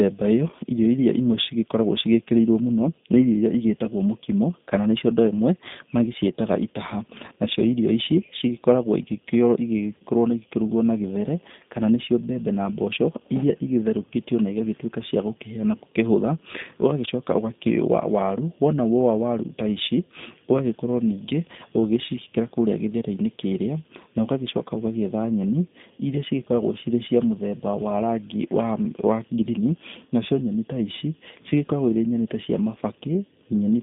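Speech runs through G.729 coding from start to finish, and the damage is plainly audible. The band is confined to roughly 150 Hz to 3.7 kHz, so the voice is thin with no air or sibilant detail. The codec resynthesises each 10 ms frame from a vocal tract filter, pitch predictor and a few pulses rather than the waveform itself, leaving a rough, slightly synthetic buzz. That character fits the 8 kbit/s G.729A variant.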